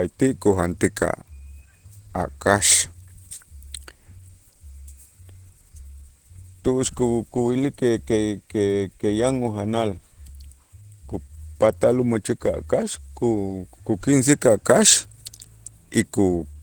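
Speech throughout carries plainly audible Opus compression damage, likely from a low-rate encode that fits roughly 16 kbps in hybrid mode: the voice sounds muffled, hoarse and grainy. A spectrogram shows content reaching about 20.1 kHz, with upper bands filled by smeared noise rather than clean harmonics.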